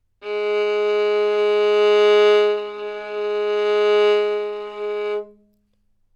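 No technical faults can be heard anywhere in this sound, so there is nothing to describe in time order.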